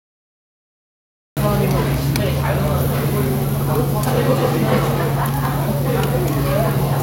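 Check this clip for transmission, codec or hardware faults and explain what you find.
There's one fault here, a cut-off start. The first 1.37 s are digital silence, then sound jumps in mid-event with no attack, because capture began late.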